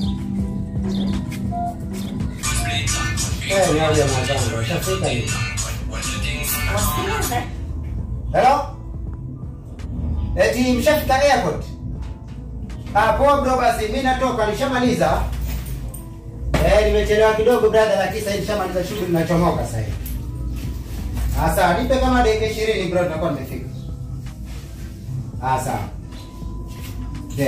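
From 1.07 to 4.27 s a doubled audio track appears: a dry copy about a second late and roughly 5 dB quieter, likely from a second, slower capture path.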